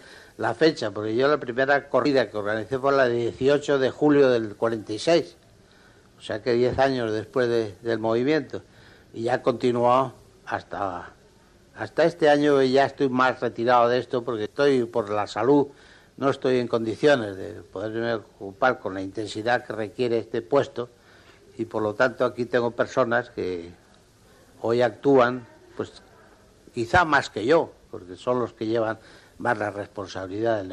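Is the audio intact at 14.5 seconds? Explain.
No. Between 14.45 and 14.47 s there's a break where the sound jumps ahead about a tenth of a second. This is compressed frames skipped: a few whole frames, which fits a frame length near 23 ms, were never played, so the audio on either side is joined directly.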